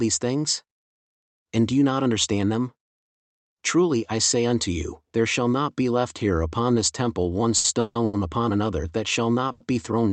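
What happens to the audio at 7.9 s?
A call audio freeze runs from 7.80 to 7.97 s, between "upon this temple one" and "upon another that shall". The jitter buffer likely ran empty while packets were delayed, so the receiver stretches the last sound into a fading buzz for about 150 ms. The speech then resumes intact, only later. On a spectrogram the final frame smears into a flat, decaying band. The waveform shows a repetitive, shrinking stretch before normal speech returns.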